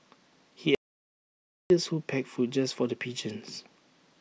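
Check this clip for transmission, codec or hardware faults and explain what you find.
One fault is present: an audio dropout to silence from 0.75 to 1.70 s. The speech cuts off abruptly and the next 0.95 s is dead silence, with no room tone or background hiss, before the voice resumes mid-flow. Whatever was spoken in that stretch is simply missing. The likely cause is that the input signal was lost briefly, through a disconnection, a failed link or an accidental mute, while the recorder kept writing silence.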